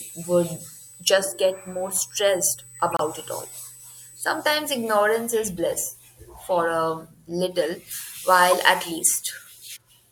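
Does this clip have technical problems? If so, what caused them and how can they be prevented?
Yes. From the start to 4.43 s a steady USB whine sits at 8 kHz, about 20 dB below the speech. The bus's 125-microsecond microframe activity draws current in pulses, and that ripple reaches the audio through a shared power or ground path. Unlike mains hum, which sits low at 50 or 60 Hz and its harmonics, this is a thin, high, fixed pitch. Powering the interface separately, or fitting a ground-loop isolator or ferrite on the USB cable, would prevent it.

There are three corrupt frames decoded: 2.90 to 3.03 s, 5.57 s and 8.51 to 8.53 s. In each, damaged bits in a compressed frame were decoded as if valid, so wrong gains and codes threw energy into the wrong frequencies for the length of the damage. The first and last are loud, near −10 dBFS. The one at 5.57 s is faint, near −35 dBFS. A lost frame would leave a gap or a smeared repeat, but these add energy that doesn't belong to the speech. 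Error checking on the transport, with damaged frames concealed instead of played, would prevent them.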